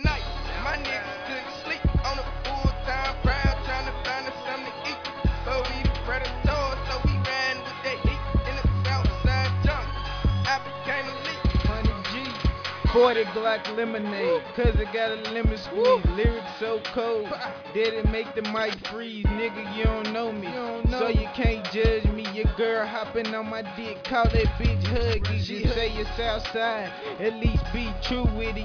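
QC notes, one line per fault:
No technical faults can be heard anywhere in the signal.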